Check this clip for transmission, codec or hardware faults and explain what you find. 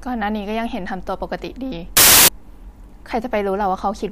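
One fault is present. From 1.97 to 2.28 s, file tags play as audio. An embedded cover picture, compressed data, is read as samples. It bursts out as very loud white noise with abrupt edges.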